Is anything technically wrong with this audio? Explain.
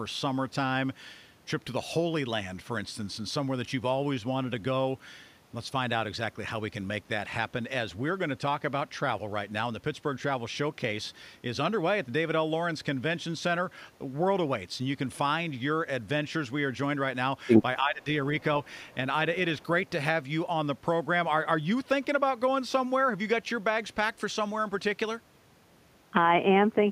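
Yes. Speech suppressed in double talk occurs from 17.79 to 18.06 s, likely because an echo canceller, faced with both ends talking at once, mistook the near talker for loudspeaker echo and attenuated it. The speech dips by around 20 dB for roughly a third of a second.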